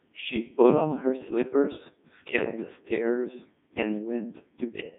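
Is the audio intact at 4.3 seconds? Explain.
No. At 4.3 seconds the speech is still running through a Codec 2 vocoder, as it is for the whole clip. The decoder rebuilds the voice from sine waves driven by pitch, voicing, energy and a spectral envelope, so the original waveform is gone and the speech sounds robotic and buzzy. The heavy damage points to a very low bitrate, around 1.2 kbit/s. A spectrogram shows neat synthetic harmonic stripes confined to about 150 Hz to 3.6 kHz, with nothing above 3.8 kHz.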